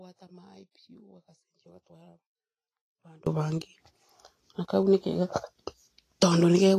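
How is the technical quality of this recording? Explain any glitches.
The recording has two problems: audible codec damage throughout, and a dropout covering the first half.

For the whole clip the speech sounds grainy and hissy, with a roughened tone and blurred consonant onsets, and nothing comes through above 14.2 kHz. This is likely Vorbis compression at a low setting, consistent with a bitrate near 28 kbps. The codec keeps a smooth outline of the spectrum but quantises the fine detail on top so coarsely that the treble turns into noise of similar energy, which is the grain heard here.

From the very start until 3.27 s the speech is already missing, leaving only a faint trace of sound roughly 25 dB below its normal level, and then it returns abruptly rather than fading in. This is likely an audio dropout to a faint residue: the wanted signal was lost while the path after the break stayed live, so only faint sound remained in the gap.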